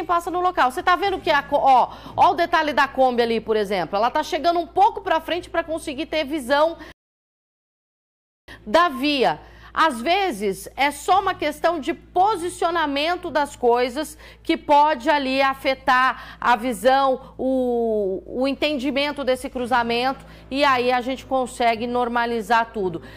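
At 6.92 s the player likely ran out of data or had its thread blocked, causing a playback stall. The output drops to silence in mid-flow for 1.56 s, and the sound carries on at 8.48 s once the player recovers.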